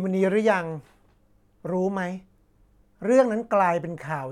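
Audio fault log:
Nothing stood out on listening to the speech in this clip.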